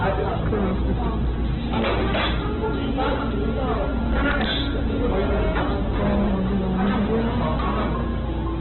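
A harsh, constant fuzz sits on every loud moment of this recording of everyday sounds, from start to finish, with the tops of the waveform squared off. This is hard clipping: the signal was pushed about 15 dB beyond what the stage could pass, so roughly a tenth of the samples hit the ceiling and were cut flat. Those flattened peaks spray extra harmonics across the spectrum, which is why the loud parts sound fuzzy rather than merely loud. Throughout, the sound is also muffled and boxed-in, with nothing above 4.1 kHz, and what remains has a rough, grainy, noisy texture instead of clean tones. That combination of a narrowband cut-off and grainy band filling points to heavy Opus compression in its music (CELT) mode as the likely cause, at a very low bitrate that fits about 8 kbps. The encoder had too few bits, so it narrowed the bandwidth and filled in the bands it kept with folded or noise-like content.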